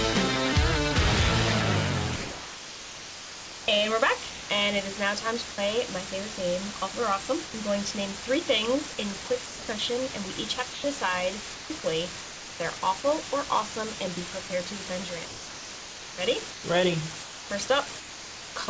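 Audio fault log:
throughout: low bit depth with dither. The sound is held to a resolution that fits about 4 bits, with dither added before rounding, so the rounding error becomes a steady, even hiss only about 5 dB below the sound, with no distortion or grit. That sets it apart from undithered truncation.
2.16–4.50 s, 8.94–9.68 s, 10.72–13.04 s, 14.48–18.68 s: sound chopped by the voice detector. Each stretch has repeated holes that add up to 1.72 s, 0.28 s, 0.76 s and 1.94 s, filled with comfort noise. The likely cause is a sender's detector switching on and off.
5.54–5.58 s and 7.46–7.54 s: sound dropped by the voice detector. Single gaps of 40 ms and 80 ms give way to steady comfort noise, then the sound returns. This is likely a detector mistaking quiet sound for background. Each gap is one clean hole, not a run of flickering holes.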